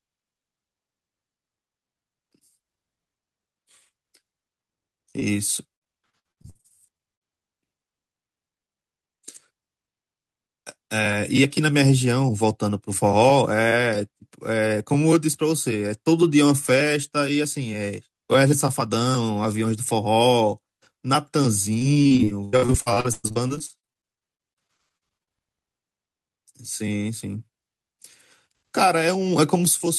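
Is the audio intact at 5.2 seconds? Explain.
No. At 5.19 to 5.23 s the speech has a short concealed packet loss: about 20 ms of the call arrived too late for the decoder, and the receiver patched roughly 15 ms of that gap by extending the preceding sound, following its pitch where voiced or substituting shaped noise where not, before crossfading back into real audio. The result is a brief smear or wobble lasting a few hundredths of a second.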